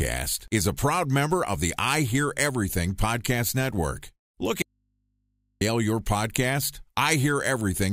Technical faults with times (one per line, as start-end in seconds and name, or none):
4.62-5.61 audio dropout to a faint residue